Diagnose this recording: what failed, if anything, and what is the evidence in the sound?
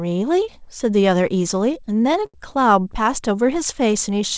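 The network stage failed, producing repeated stalls (stutter) in the speech from 1.73 to 2.37 s. Six separate hitches break up that span, the longest lasting 79 ms. Together they fill about 127 ms, a fifth of the stretch. Packets reached the jitter buffer late, so it kept running dry. Each time, the receiver extended the last sound until data resumed. Nothing is lost, but the delivery drags. The sound has no content above 8 kHz, which fits G.722 on a call path.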